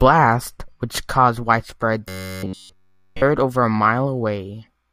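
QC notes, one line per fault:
2.09–3.23 s, robotic sound from repeated short buffers: for just over a second the speech collapses into a rigid, metallic buzz pitched at 93.8 Hz, with the rough shape of the syllables still traceable. Across the whole stretch, the output is likely replaying one short chunk of about 11 ms over and over while fresh audio fails to arrive, so the underlying speech is skipped and the repetition rate imposes that fixed pitch.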